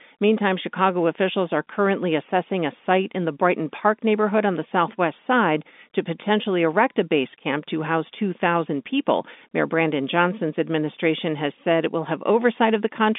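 Telephone-band speech, with no technical faults to report.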